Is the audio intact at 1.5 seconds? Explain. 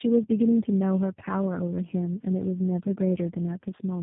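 No. At 1.5 seconds the speech carries tandem speech coding, which runs through the whole clip. It sounds like three low-rate speech codecs in series, fitting GSM full rate, AMR-NB and G.729A. Each re-encodes the last one's errors, so the speech is rough, muffled and warbly. A spectrogram shows nothing above 3.8 kHz and smeared, wobbling formant bands.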